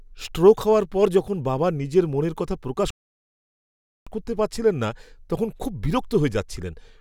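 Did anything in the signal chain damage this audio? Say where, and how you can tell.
Yes, at the playback stage, where a rebuffering stall interrupts the speech from 2.90 s to 4.07 s. Right after "নিজের মনের কথা প্রকাশ" the audio drops to silence, then picks up cleanly with "করতে পারছিলেন না তখন", adding about 1.16 s. The player emptied its buffer and waited for more data. Unlike a network dropout or packet loss, no speech is missing: the phrase continues exactly where it stopped.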